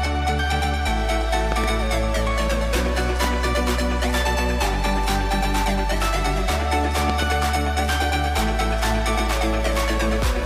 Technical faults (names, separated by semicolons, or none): loud pop